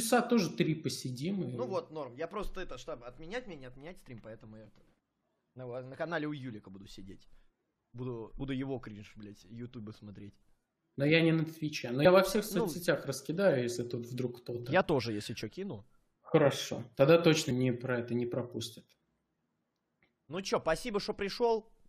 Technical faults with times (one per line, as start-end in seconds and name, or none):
8.39 damaged data in a compressed stream
12.04 damaged data in a compressed stream
17.50 damaged data in a compressed stream